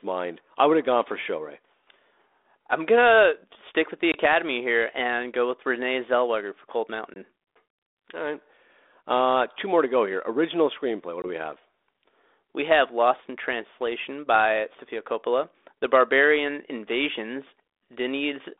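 Packet loss on an ADPCM call hits three times, at 4.12, 7.14 and 11.22 s: about 20 ms drops to silence with a hard edge, probably a single packet each time. Afterwards the 32 kbit/s G.726 decoder's predictor and step size are out of sync, so the speech comes back with brief, slight distortion.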